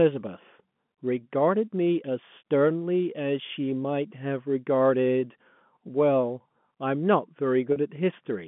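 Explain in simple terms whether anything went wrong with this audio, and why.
At 7.72 to 7.76 s, 40 ms of data was lost. Packet loss with pitch repetition bridged the gap, briefly holding the speech in a slight buzz.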